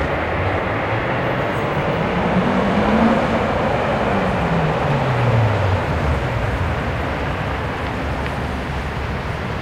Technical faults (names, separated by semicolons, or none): none